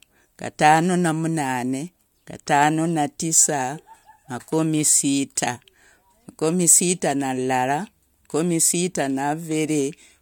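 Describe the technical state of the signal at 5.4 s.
At 5.4 s the speech signal is intact, with no audible fault at that moment.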